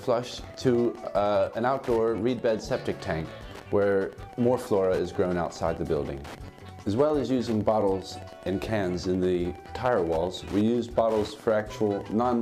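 A steady ticking runs through the whole recording at about ten clicks per second, sitting roughly 25 dB below the main sound. This is Wi-Fi interference: a nearby radio's beacon, repeating every 102.4 ms, is being picked up and rectified by the audio circuit.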